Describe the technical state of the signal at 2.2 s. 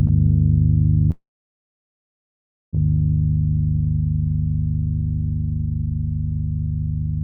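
At 2.2 s there is only silence. The sound broke off at 1.11 s, a brief fading buzz or hiss continued the last sound, then nothing until 2.76 s. This is a long network dropout, likely about 1.6 s of audio that never arrived.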